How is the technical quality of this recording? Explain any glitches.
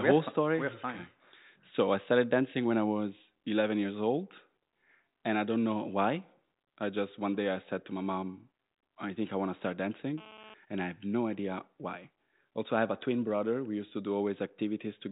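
The recording is telephone-band speech with one clear glitch. The audio stops at 3.8 kHz, which fits G.726 ADPCM at 40 kbit/s.

From 9.64 to 10.54 s, between "think I want to" and "and I have no", there is GSM phone buzz. A nearby 2G phone transmits bursts 217 times a second, and the audio circuit rectifies those radio pulses. The result is a hard, raspy, harmonic-rich buzz about 17 dB below the speech, coming and going as in a data transfer.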